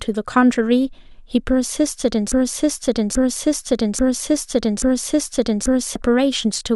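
From 2.32 s to 5.96 s the playback chain likely stalled and kept resending the last fragment it held. The result is a broken-record loop: a 0.83 s stretch of speech repeats four times, back to back and identical, and the speech that belonged there is lost.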